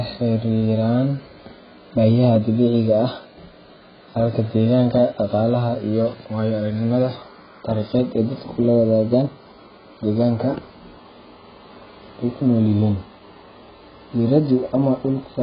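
From start to finish the speech is dull and band-limited, with nothing above 5 kHz, and it carries a warbling, watery smear on vowels and fizz on sibilants. Heavy AAC compression is the likely cause, pointing to roughly 12 kbps. A plain low-pass filter would sound clean rather than smeared.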